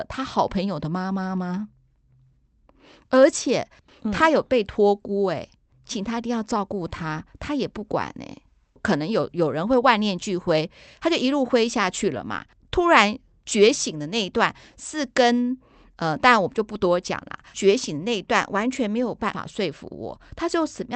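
Listening closely to the speech, nothing stood out as a technical fault anywhere in the recording.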